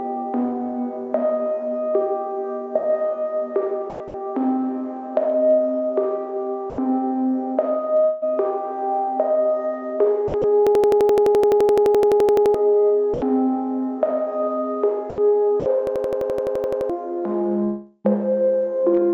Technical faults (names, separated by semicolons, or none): sound chopped by the voice detector; sound dropped by the voice detector; long network dropout; system hang loop